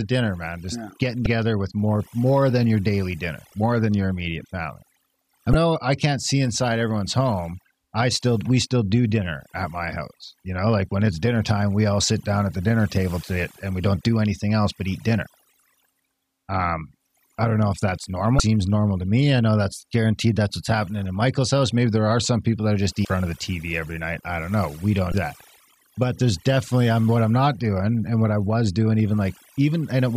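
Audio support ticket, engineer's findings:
Overdone noise removal, whole clip. Noise suppressor set far too aggressive: bands near the noise estimate are pulled down hard or gated off, taking low-level voice detail with them. Result: background collapses to near silence with twinkling specks between phrases. Upstream recording was noisy; fix at the denoise stage, reduce strength or re-run from the unprocessed source.

Damaged data in a compressed stream, five hits: 1.23–1.26 s, 5.51–5.55 s, 18.37–18.40 s, 23.02–23.05 s, 25.11–25.14 s. Corrupt bytes in the encoded stream; decoder misreads or drops the affected frames, loses sync, hunts for the next frame header. Each heard as a short chirp or blip of roughly 30 ms. Check transport/storage integrity of the file or stream.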